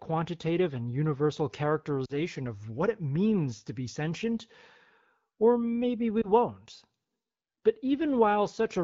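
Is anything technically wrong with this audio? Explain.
Yes, there are lost AMR speech frames. Radio errors caused frames to fail their checksum, and the AMR-WB decoder, whose light coding wear fits about 12.65 kbit/s, filled the gaps by reusing the last good pitch and vocal tract settings at falling gain. After "and universal", from 2.05 to 2.20 s, about 40 ms went missing, which fits two frames, so the sound sinks toward near silence before "of what it means". After "or maybe we", at 6.21 to 6.27 s, a single 20 ms frame gives a brief dip or warble. Each time the voice returns weak or rough for a moment.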